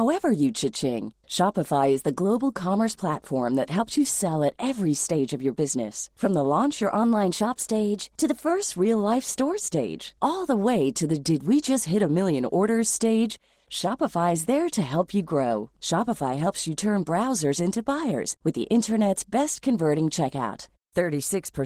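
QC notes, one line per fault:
Throughout: Opus voice compression. The audio points to a rate around 16 kbps in hybrid mode: a linear-prediction coder carries the band below 8 kHz, and a transform layer covers the top of the fullband range. Coarse coding of the excitation at this rate leaves plainly audible codec damage across the whole clip.
6.95–8.50 s: drift correction step. Playback abruptly runs about 5.9% fast, raising pitch by roughly 100 cents, almost exactly a semitone, and then snaps back at 8.50 s. This is likely a clock-matching correction that resampled in one gross step, so speed and pitch shift together.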